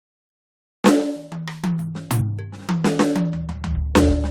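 At 2.20 to 2.22 s the music is broken by a brief glitch. This is damaged data in the compressed stream: corrupted bytes left the decoder misreading those frames, losing sync and hunting for the next valid frame header.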